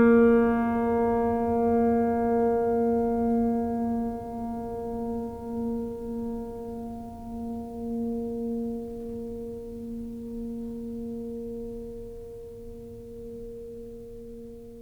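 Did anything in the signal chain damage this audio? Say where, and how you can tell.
No, nothing damaged this music.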